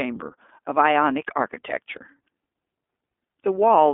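The whole clip carries the sound of the iLBC codec. Each short frame is coded on its own, which fits 20 ms frames at about 15 kbps. Speech sounds rough and slightly synthetic. The band runs only from about 250 Hz to 3.5 kHz.

At 1.97 s an electrical switching spike lands on top of the speech. It is a sharp snap, about 2 ms long. Its likely cause is a nearby switch, motor or static discharge arcing into the audio line.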